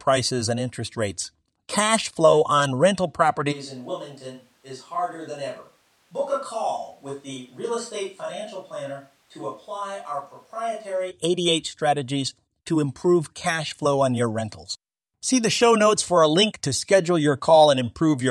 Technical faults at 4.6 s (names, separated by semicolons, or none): switch to a distant microphone